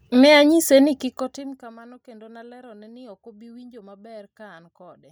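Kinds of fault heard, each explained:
Zipper noise: from 0.79 to 1.74 s the level falls about 25 dB in unsmoothed steps, roughly a hundred a second, each clicking audibly.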